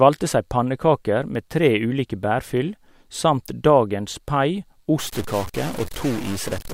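From 4.99 s to the end, harsh buzzy distortion appears, likely a stuck bit worth about -30 dBFS, which, unlike clipping, also fills pauses with noise.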